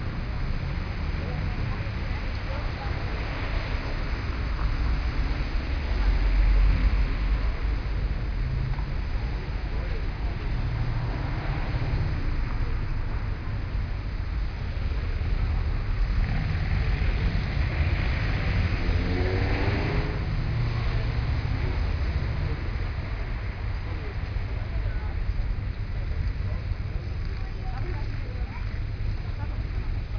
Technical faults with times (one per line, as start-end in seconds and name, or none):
none